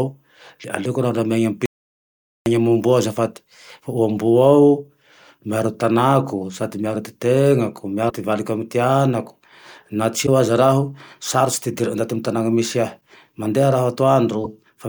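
From 1.66 s to 2.46 s the speech cuts out into an audio dropout to silence. The gap is silent with no room tone underneath, and about 0.80 s of speech is simply missing. The hard edges on both sides and the total absence of background point to the input being lost while the recorder kept writing samples. The likely cause is a momentary disconnection, link failure or stray mute upstream of the encoder.

Later in the clip a broken MP3 bit reservoir shows up at 8.09 to 8.12 s, 10.26 to 10.28 s, 13.00 s and 14.43 to 14.46 s. Each event is a short skip forward where the decoder resumes, no longer than about one 26.1 ms frame. This likely comes from frames having been dropped from the stream. The frame after each cut reaches back into the reservoir for bits that now belong to a different frame and decodes them as nonsense before the stream resynchronises.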